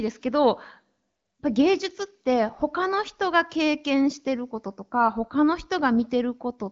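No technical faults can be heard in this speech. It carries the sound of the AMR wideband (HD Voice) codec working normally: only light coding traces, no content above about 7.5 kHz, and clarity that fits one of the codec's higher rates, around 15.85 kbit/s.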